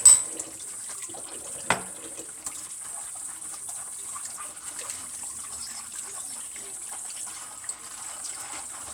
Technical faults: none

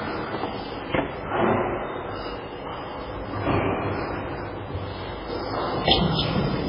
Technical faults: MP3 compression

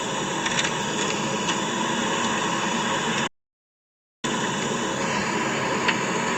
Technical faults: audio dropout to silence

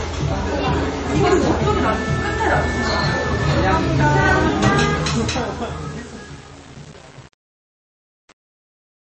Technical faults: MP3 compression; truncation distortion on a fade

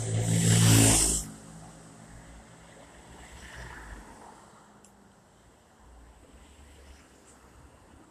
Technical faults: none

